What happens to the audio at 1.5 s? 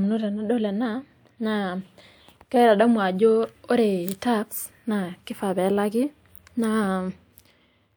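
Nothing goes wrong at 1.5 s; the speech carries on intact through that moment.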